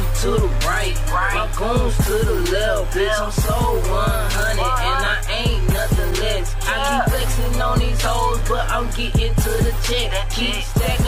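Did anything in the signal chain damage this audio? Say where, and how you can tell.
Yes, in the analogue wiring: there's computer activity noise running the whole way through, a buzzy, chirpy layer pulsing at around 70 times a second and sitting roughly 25 dB under the programme. The giveaway is that it doesn't track the sound at all; it keeps going regardless of what the audio is doing. The processor, graphics card or mouse are pulling varying current through a ground shared with the audio circuit, so their load changes leak straight into the signal.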